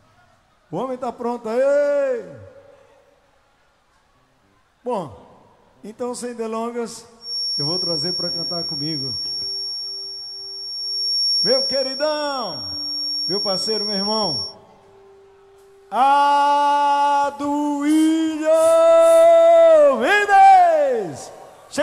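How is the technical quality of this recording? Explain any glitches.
There's one clear problem: a feedback whistle running from 7.18 s to 14.56 s. A thin, steady tone at 5.5 kHz sits behind the sound, roughly ten decibels under it, swelling and fading slowly in level as it goes. The likely cause is a loudspeaker-to-microphone loop hovering right at the edge of feedback. That one frequency keeps ringing without running away into a full howl, so you get this persistent high whistle for about seven seconds.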